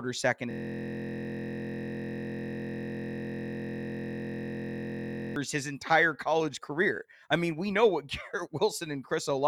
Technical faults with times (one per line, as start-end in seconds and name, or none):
0.51-5.36 system hang loop